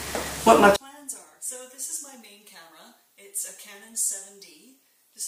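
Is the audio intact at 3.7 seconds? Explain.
No. From 0.76 s to the end of the clip, one stereo channel likely has its polarity flipped, so at 3.7 s the two channels work against each other when summed to mono. Everything they share cancels, and the level drops by about 26 dB. Centred material all but disappears, leaving only a faint residue made of whatever differs between the left and right channels.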